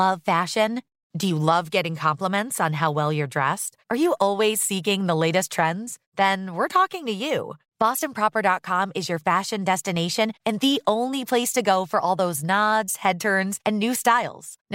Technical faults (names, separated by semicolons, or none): none